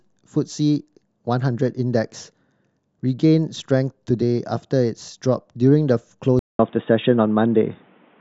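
At 6.39 s the speech drops out for 200 ms. From there to the end, the sound turns dull and boxy. Nothing above 3.8 kHz remains. The level shifts by about 5 dB. A new noise floor sits well below the voice. The input likely switched to a poorer device.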